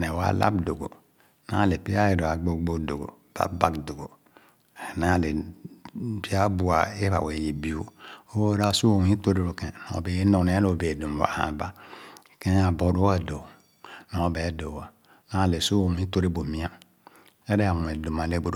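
Nothing goes wrong anywhere in this stretch of speech; there's no technical fault to point to at any moment.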